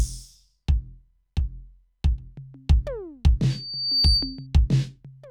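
Music clip. Loudspeaker feedback squeal from 3.50 to 4.47 s: a 4.6 kHz tone builds over about half a second, ending about 5 dB above the music.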